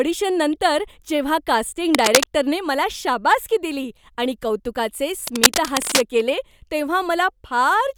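From 1.94 to 2.26 s, and again from 5.27 to 6.01 s, a dense, uneven scratching rides over the speech at roughly the same loudness. This is cable scratch noise, likely from a worn cable, plug or control being moved so its contact resistance jumps about rapidly. Unlike steady crackle or isolated clicks, it comes in short irregular bursts that start and stop with the movement, and the speech underneath continues without gaps.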